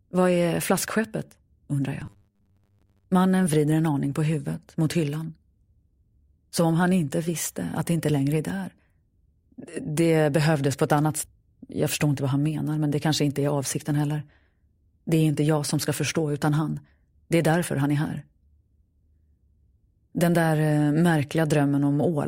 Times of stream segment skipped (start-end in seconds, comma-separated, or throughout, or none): 11.23-11.28